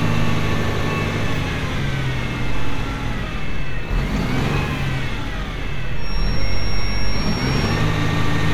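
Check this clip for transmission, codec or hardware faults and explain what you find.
Two kinds of fault are present: damaged data in the compressed stream, heard twice, and a feedback whistle in the later part of the clip.

Damaged data in a compressed stream appears from 4.14 to 4.18 s and again at 6.35 s. Bytes in the encoded file were lost or overwritten at those points, so the decoder misread the affected frames, lost sync and hunted for the next valid header. Each event is a short chirp or blip.

A feedback whistle runs from 5.94 to 7.87 s: a thin, steady tone at 5.6 kHz, sitting well below the main sound and wavering slightly in level. The likely cause is a loudspeaker-to-microphone loop held just at the edge of feedback, so one frequency keeps ringing without building up. What separates it from runaway howl is that it never grows louder, and unlike a fixed electrical tone it drifts a little in level. 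The second data fault at 6.35 s falls inside this stretch but is a separate, much briefer event.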